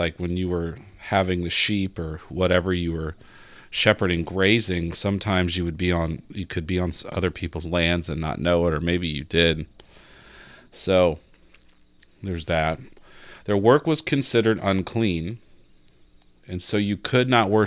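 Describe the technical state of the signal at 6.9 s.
At 6.9 s the speech signal is intact, with no audible fault at that moment.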